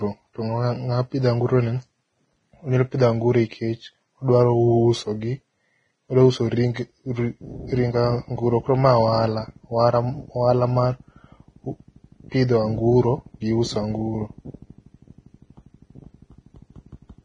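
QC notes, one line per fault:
throughout: Vorbis compression. The speech has nothing above 9.7 kHz, and the remaining treble is heavily damaged: hissy, grainy noise replaces fine detail, tones sound roughened, and attacks blur. This likely comes from Vorbis coding at a low rate, pointing to a bitrate near 22 kbps.
6.74 to 6.76 s: pre-echo. A short burst of hiss smears about 21 ms ahead of a sharp attack, softening its onset. The codec spread quantisation noise across the whole transform block, so noise sized for the loud onset leaked into the quiet moment before it.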